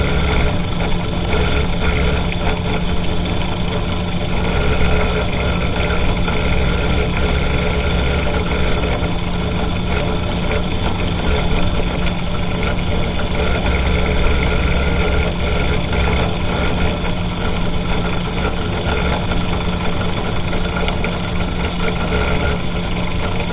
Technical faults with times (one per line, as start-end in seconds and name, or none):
none